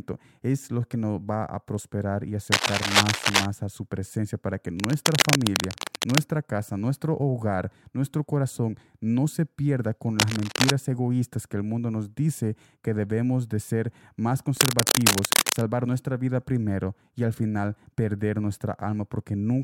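A worn cable or connector, likely being moved during recording, varies its contact resistance erratically, producing cable scratch noise: dense, ragged bursts of crackle laid over the speech. It occurs four times: 2.52–3.46 s, a few dB louder than the speech; 4.77–6.21 s, after "su presencia para que", roughly level with it; 10.19–10.70 s, after "no se pierda con", similarly level; and 14.57–15.63 s, after "debemos de ser más", again rising above the speech.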